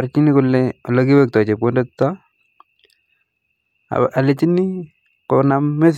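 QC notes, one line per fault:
No technical faults can be heard anywhere in this speech recording.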